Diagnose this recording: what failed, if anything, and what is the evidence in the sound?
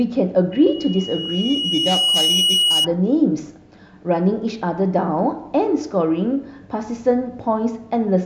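A 2.9 kHz tone swells from 0.52 s to a squeal about 5 dB above the speech until 2.88 s: loudspeaker feedback squeal, as the microphone re-amplifies its own loudspeaker.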